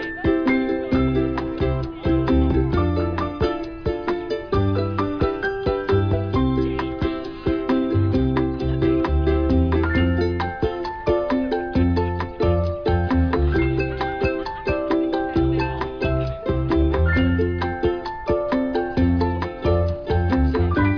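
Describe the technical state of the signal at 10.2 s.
Around 10.2 s, the signal is intact, with no audible technical fault at that point.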